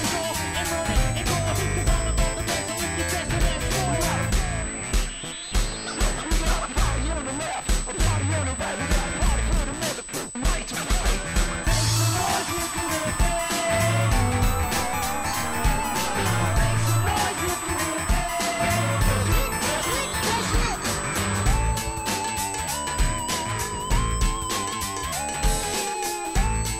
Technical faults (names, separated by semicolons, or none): USB whine